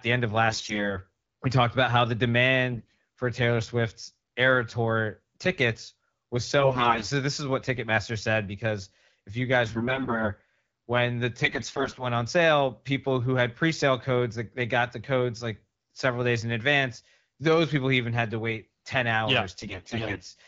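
On a weak link, AMR bit errors flipped the less protected bits of each frame, misplacing excitation pulses and skewing fine pitch, gain and spectral values, at 0.50, 2.72, 6.60, 9.66 (after "said because if you"), 11.43 (before "on sale people who") and 19.61 s. Each burst lasts about 0.3 to 0.7 s, and the speech keeps its rough pitch and level but turns hoarse, scratchy and gargly over the clear 12.65 kbit/s wideband coding.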